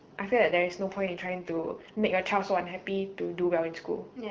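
From 0.92 to 1.96 s the speech turns rough, buzzy and synthetic, then clears again. This is an AMR rate drop: the wideband codec falls from a clean HD Voice setting, which fits 12.65 kbit/s, to a much coarser one, which fits 6.6 kbit/s, spending fewer bits on the voice itself. On a spectrogram the band still reaches about 7 kHz, but harmonics blur into grainy noise; the waveform shows no gap or level step.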